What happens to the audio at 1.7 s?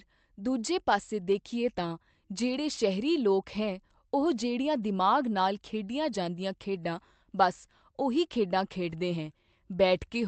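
Nothing goes wrong at 1.7 s: the speech passes through intact, carried normally by the Opus call path with its usual upper limit around 8 kHz.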